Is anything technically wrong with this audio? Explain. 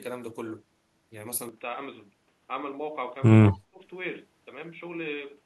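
Yes. From 3.51 to 3.82 s, the speech is suppressed in double talk: for about a third of a second it drops sharply, by roughly 20 dB. The likely cause is an echo canceller muting the talker while the far end spoke. On a waveform the envelope collapses, and a spectrogram shows the energy dimming over that span.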